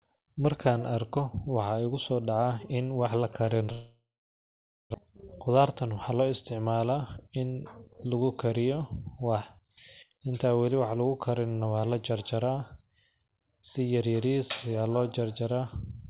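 Right after "in wa la karin", at 3.72 s, the speech stops. A long network dropout is the likely cause. A fading buzz fills the gap, then silence for 0.88 s, until 4.96 s. About one second of speech is simply gone.

Two jitter buffer speed-ups follow, from 5.34 to 6.28 s and from 6.91 to 7.58 s. The receiver trims pitch-period slices to drain excess buffered delay. Speech runs 9% and then 8% fast at unchanged pitch, sounding hurried. Nothing above 4 kHz is present, consistent with a narrowband call codec.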